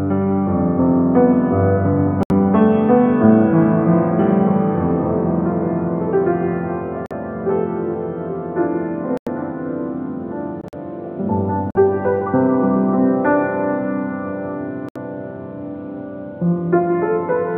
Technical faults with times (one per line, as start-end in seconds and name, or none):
2.23-2.32 corrupt frame muted
7.06-7.12 corrupt frame muted
9.17-9.28 corrupt frame muted
10.61-10.74 corrupt frame muted
11.70-11.77 corrupt frame muted
14.89-14.97 corrupt frame muted